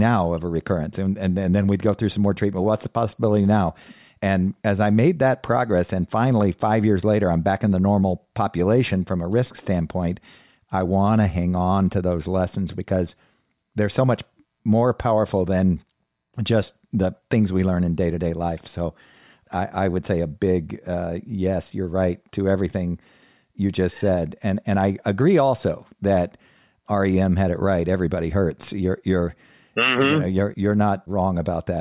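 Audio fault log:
No faults were heard anywhere in the recording. Nothing in the audio calls for an entry in this log.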